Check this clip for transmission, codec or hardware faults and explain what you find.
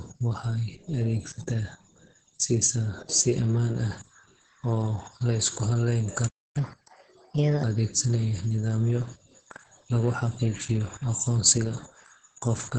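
Three faults are present: heavy voice-codec damage throughout, a brief playback stall, and a sped-up stretch right after it.

Opus voice compression runs through the whole clip. Nothing is heard above about 9.2 kHz, and the speech sounds muffled, hoarse and faintly robotic. That fits the SILK linear-prediction coder working at a very low bitrate, around 10 kbps, and coding the excitation coarsely. A plain low-pass filter would dull the top end without adding this grainy, synthetic texture.

The playback stall runs from 6.28 to 6.57 s, just after "la isku halleyn". The audio drops to silence for about 270 ms, then resumes. The likely cause is the player running out of buffered data. Packet-loss concealment would fill a gap like this with smeared sound, but here there is true silence.

Catch-up at higher speed follows from 6.57 to 7.64 s. The audio plays at 1.25 times normal speed with pitch raised about four semitones, as the player resamples its backlog, then returns to normal. 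Tempo and pitch rise together, which rules out a pitch-only shift.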